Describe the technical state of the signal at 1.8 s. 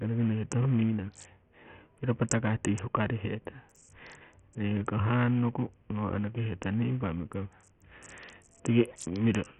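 At 1.8 s the speech carries the same damage heard throughout: nothing above 11.4 kHz, a flickering top end and a gritty, aliased edge. That's likely Bluetooth SBC compression starved of bits, which fits a bitrate down around 48 kbps, with the upper sub-bands dropped and the rest coarsely quantised.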